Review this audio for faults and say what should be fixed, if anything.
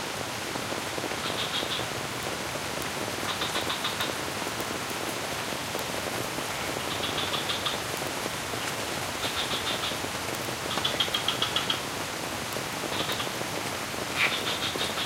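Word clock ticks run from 0.15 s to 15.01 s, about ten per second. Unlocked clocks, roughly 200 ppm apart, drop or repeat one sample each time. Lock the receiving device to the sender's word clock.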